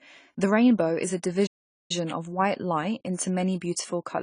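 A short speech clip carries AAC compression throughout. The speech sounds dull and smeared, with plainly audible swirly, fizzy texture on sibilants and held vowels. The cause is likely AAC-LC coding at a low bitrate, around 24 kbps. A plain low-pass filter would also remove the top end but leave the remaining band clean. Here the warbling comes from quantisation and the gaps left in the spectrum. A playback stall runs from 1.46 s to 1.91 s, just after "rainbow is a". The sound stops for about 0.43 s and resumes at "of white light into". This points to the player likely running out of data or being blocked. A network dropout or packet loss would instead fill the gap with concealment noise, while this is clean silence.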